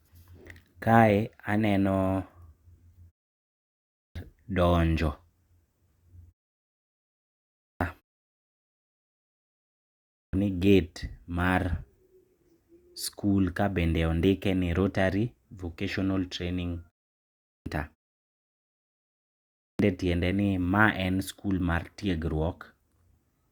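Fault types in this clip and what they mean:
Clipped start after a pause: during silence the output device drops into a sleep state and needs time to wake, swallowing roughly 350 to 390 ms of sound. Speech then resumes abruptly without its opening sounds, five times between 3.79 and 19.43 s.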